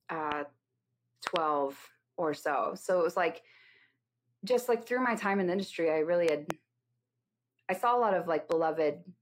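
Loud pops at 0.32–0.34 s, 1.27–1.38 s (a double), 6.29–6.52 s after "the industry I really" (double), and 8.52–8.54 s after "I saw a lot", sharp thumps about 15–20 dB above the speech, which continues underneath. They likely come from a sudden voltage pulse, such as a switch, static or driver glitch.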